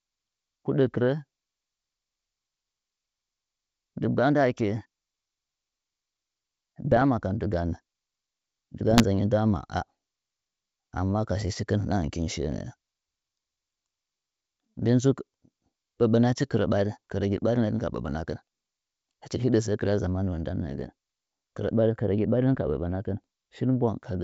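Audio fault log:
6.85–7.02 s, 8.89–9.02 s and 22.65–22.71 s, bit errors on an ADPCM link: light corruption, under one percent, throws the G.722 decoder's step size off, so each brief burst pops and roughens.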